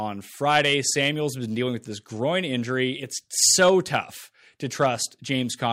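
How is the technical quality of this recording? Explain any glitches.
The recording has hard clipping in three places: crackle on the speech peaks from 0.49 to 1.09 s, from 3.43 to 3.96 s, and briefly from 4.82 to 4.86 s. The level overdrove the signal chain by about 5, 4 and 2 dB respectively, so the peaks were cut flat, adding high-frequency harmonics.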